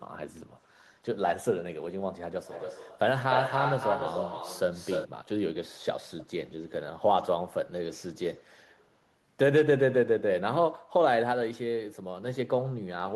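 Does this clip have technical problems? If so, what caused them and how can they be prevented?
Yes. An echo leak, likely caused by a loudspeaker on one side whose echo canceller let part of its microphone pickup return, adds a delayed copy of the speech at 0.48–0.64 s, 2.45–2.99 s, 3.29–5.08 s, 6.08–6.25 s and 8.7–8.88 s. The copy lags by 266 ms at first, drifting to 311 ms. It is barely audible in the first and last spots and loudest at 3.29–5.08 s, where it sits only about 5 dB below the speech. Using a headset, or an echo canceller that tracks a drifting delay, would prevent it.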